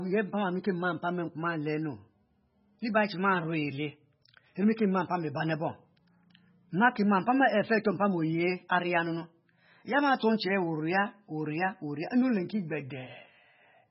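MP3 compression, likely the cause, runs throughout: heavy bit starvation removes everything above 5.6 kHz and flickers weak spectral lines, giving watery, swirly speech.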